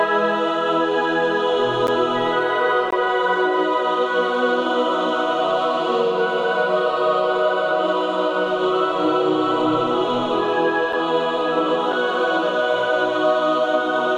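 The stream's segment timestamps fail to line up at four boundaries, a gap between stream segments, and the player fills each shortfall with silence. The segments here are 1 s long, so the holes fall on that grid: about 11 ms at 1.87 s, a longer 20 ms break from 2.91 to 2.93 s, then 6 ms at 10.93 s and 5 ms at 11.92 s. Each is a hard-edged dropout that briefly stops the sound, with nothing missing afterward.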